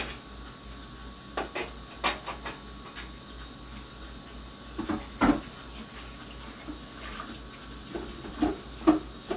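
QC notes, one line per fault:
Nothing stood out on listening to this everyday sound, which comes through a G.711 mu-law call path with nothing above 4 kHz.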